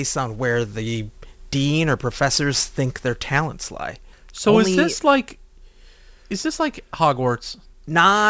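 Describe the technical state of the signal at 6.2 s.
At 6.2 s the speech carries aliasing, present across the whole clip. The sample rate was cut without a filter first, which fits a drop from 48 kHz to 16 kHz. Energy above 8 kHz had nowhere to go. It folded back below 8 kHz as false, unrelated tones. Those tones sit roughly 20 dB under the speech. Sibilants sound gritty and metallic. The spectrum runs hard up to the 8 kHz edge.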